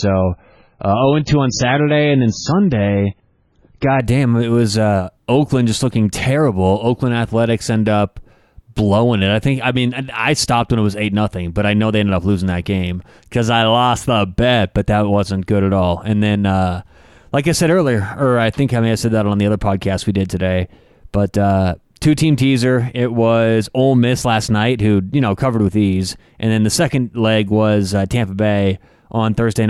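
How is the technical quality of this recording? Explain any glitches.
The opening seconds are degraded. From 0.0 to 4.0 s, until "it was uh", the adaptive stream starts at a low bitrate: nothing above 7 kHz, heavy codec artefacts suggesting roughly 16 kbit/s MP3, then quality jumps abruptly without a gap.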